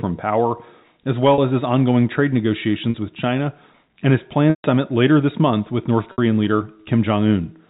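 At 1.34 s, just after "power as", 40 ms of audio drops out, and again at 2.90 s after "as his ongoing trade". Both times packet loss with pitch repetition fills the gap by looping the last pitch period, so the sound briefly holds with a buzzy edge. The same happens for 60 ms at 6.12 s. The longest gap is 140 ms at 4.50 s, after "and his" and before "later this month with". There the looped cycle fades to silence before a short cross-fade brings the speech back. On a spectrogram each event shows as flat, evenly spaced harmonic bands with no formant movement, capped at 4 kHz by the G.711 telephone coding. The 140 ms event thins into a dark gap. In the waveform, each gap shows identical repeated cycles with a decaying envelope.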